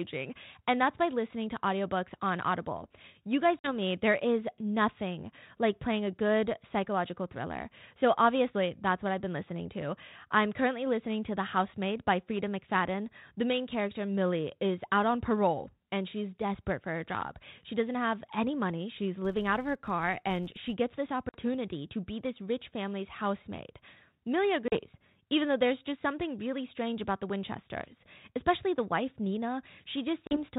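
First thing in this speech clip is packet loss on an ADPCM call at 3.59 s, just before "me there is nothing." About 50 ms drops out to hard-edged silence, a handful of packets' worth. Because the decoder's adaptive predictor and step size lose track of the sender's, the speech comes back slightly distorted, then settles over a few tens of milliseconds. Underneath it all is the usual 32 kbit/s G.726 sound, topped out below 4 kHz.

From 19.25 to 20.75 s, between "have any money she's" and "gets this," there's a filter restarted on every block. The filter dumps its memory at each block boundary and starts from silence, so every block opens with a small transient. That gives a steady buzz at about 86 Hz that rises and falls with the speech level, which fits a 512-sample block.

Then the packet loss comes back three more times. At 21.29 s, right before "to be this rich," about 50 ms goes. At 24.68 s and 30.27 s about 40 ms drops each time. 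All three have the same abrupt hole followed by slightly distorted speech as the predictor catches up.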